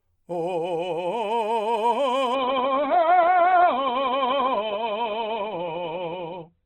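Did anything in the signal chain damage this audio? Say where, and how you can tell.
Yes. At the network and codec stage, an adaptive stream switched to a lower bitrate at 2.35 s and stayed there to the end. The music suddenly loses everything above 4.3 kHz, and coding artefacts become audible, with no gap at the switch. This points to the player dropping from something like 64 kbit/s Opus to about 12 kbit/s when the connection slowed, where the encoder can no longer afford the high band.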